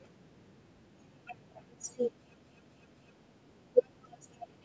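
A CD stuck on one turn runs from 2.36 to 3.12 s. Damage on the disc makes the laser jump back one track at the same point on each rotation, so a 0.25 s slice of the speech replays three times in a row, each pass cut off by a brief mute at the jump. The result is a quick, evenly spaced stutter, heard over the band-limited sound of call microphone processing with nothing above 8 kHz.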